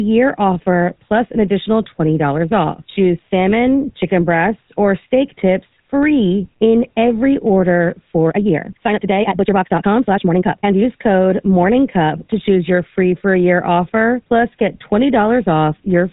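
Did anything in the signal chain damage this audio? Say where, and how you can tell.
Yes. From 8.23 to 10.85 s, between "free in every order" and "code morning cup to", the speech runs about 1.88 times faster yet keeps its pitch, sounding rushed. That marks a time-stretched section, likely from a length-fitting step at playback. A plain speed change would also raise the pitch.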